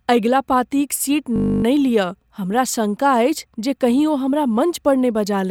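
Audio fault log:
1.36–1.64 s system hang loop: the computer or audio driver stalled while the hardware kept replaying one 20 ms stretch of its ring buffer, 14 times. That exact 50 Hz repetition replaces the speech with a steady buzz, with next to no audio lost.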